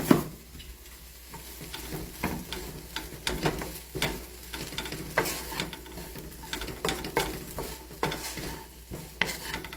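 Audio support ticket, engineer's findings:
Transcoding between lossy codecs, throughout the clip. Stacked artefacts: smeared, swirly texture plus fresh coding grit. Spectrogram: patchy, blocky high bands, empty above 20 kHz. Likely an HE-AAC pass re-encoded to Opus, fitting roughly 32 kbit/s each. The second encoder re-codes the first's artefacts and adds its own.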